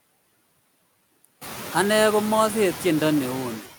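Noise suppressor artifacts run through the whole speech clip. The suppressor pulls down bands it judges to be steady noise, by about 17 dB. The background drops away in pauses and swells back under speech. This stands out after the room noise rises by about 15 dB around a second and a half.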